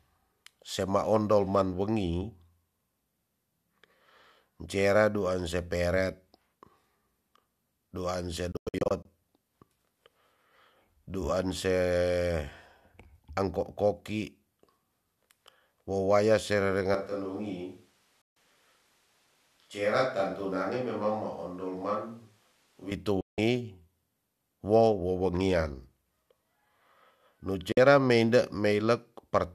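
Digital broadcast dropout, 8.52 to 9.06 s: the receiver mutes on failed frames, punching several brief silent holes, about 264 ms lost in all, each snapping off within 3 ms.

Switch to a distant microphone, 16.95 to 22.91 s: speech abruptly turns roomy, hollow and thinner, a few decibels quieter with faint added background noise, likely from falling back to a farther microphone.

Further digital broadcast dropouts cut the sound to silence at 18.22 to 18.37 s, 23.21 to 23.38 s and 27.72 to 27.78 s.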